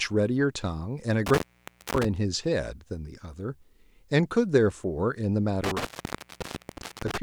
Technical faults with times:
1.26-2.05 intermittent contact
5.64-7.18 intermittent contact

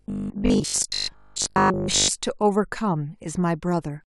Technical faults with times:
0.02-2.10 robotic sound from repeated short buffers

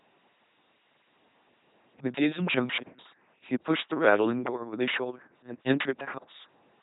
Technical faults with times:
0.00-6.83 LPC-10 vocoder

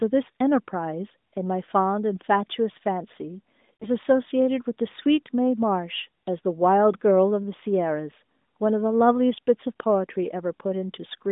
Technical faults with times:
3.77-3.88 lost AMR speech frames

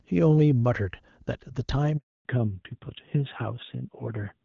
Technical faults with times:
1.97-2.25 handover gap
2.25-4.45 fallback to narrowband

